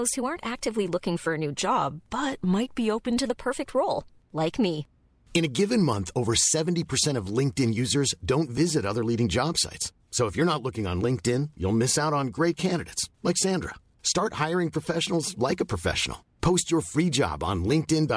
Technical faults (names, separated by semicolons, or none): wrong sample rate